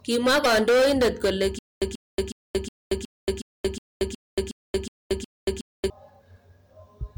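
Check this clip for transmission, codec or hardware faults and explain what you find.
Three faults are present in this speech clip: hard clipping throughout, a burst of damaged data in a compressed stream near the start, and a long stutter with silent gaps.

Hard clipping runs the full length. The signal is driven about 13 dB beyond what the stage can pass, so every peak is sheared flat, and around a tenth of all samples were clipped. Those flattened tops generate strong high-order harmonics well above the speech band. At this depth the result is a continuous harsh fuzz on every loud syllable rather than occasional crackle.

Damaged data in a compressed stream appears from 0.42 to 0.46 s. Corrupted bytes in that region cause the decoder to misread or reject the affected frames, lose synchronisation and hunt for the next valid frame header before resuming. The audible result is a brief disturbance lasting roughly 40 ms.

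The stutter with silent gaps runs from 1.59 to 5.9 s. A 137 ms fragment of audio repeats 11 times, each repeat followed by 229 ms of digital silence, giving a steady cycle of about 366 ms. The likely cause is a stalled player or stream that replays its last buffered fragment on every retry and then runs dry. Whatever speech should have played across those four-plus seconds is missing.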